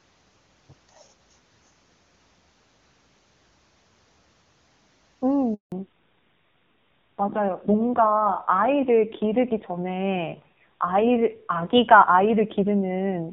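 Up to about 5.54 s the speech sounds like clean HD Voice, with the crisp top end you'd expect from AMR wideband running at a high rate. Then there's a handover gap. The call jumps from one network to another, and for about 180 ms, from 5.54 to 5.72 s, no speech frames arrive at all. The voice fades out almost instantly, sits in dead silence, and whatever was said in that window is simply gone.

When the sound returns at 5.72 s, it's fallen back to narrowband and stays that way to the end. Everything above 4 kHz has disappeared, so the sibilants lose their edge and the speech goes dull and boxy, like an old landline. There's also a rough, grainy quality that wasn't there before, which points to a low-rate narrowband codec, something in the region of 6 kbit/s rather than a comfortable higher mode.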